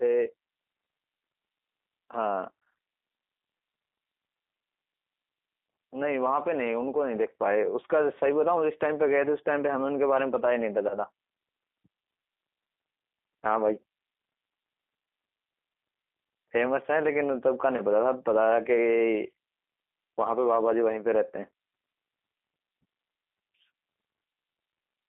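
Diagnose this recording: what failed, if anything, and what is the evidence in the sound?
The G.729 codec stage encodes the speech at 8 kbit/s through a 250 Hz to 3.6 kHz band, leaving it plainly rough, thin and slightly synthetic throughout.

VoIP packet loss concealed by the speech codec, at the network stage: a 20 ms gap, consistent with a single lost packet, was extrapolated by the decoder, leaving stretched, fading distortion from 10.89 to 10.97 s.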